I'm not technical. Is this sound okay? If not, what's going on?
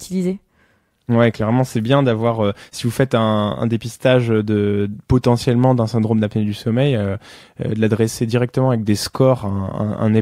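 Yes, this sound is okay; nothing is going on with it.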